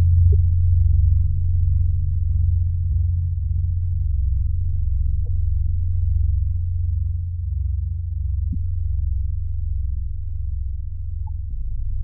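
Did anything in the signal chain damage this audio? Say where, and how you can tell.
Yes. The damage is at the codec stage: damaged data in a compressed stream. Short blips of about 40 ms break in at 0.30, 2.89, 5.24, 8.51 and 11.25 s. At each, the decoder misread corrupted frames and lost sync until the next frame header.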